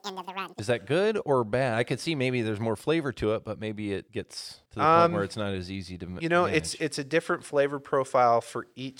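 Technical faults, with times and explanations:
0.0 to 0.59 s, audio read two samples at a time (double speed): the opening runs twice as fast and a full octave up, 12 semitones, because each pair of samples was taken as one frame. Normal playback picks up at "that good or bad".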